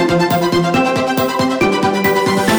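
From start to finish the audio is read two samples at a time, so it plays at double speed and a full octave high. Unlike a plain resampling speed-up, pairs taken as one frame fold high frequencies back.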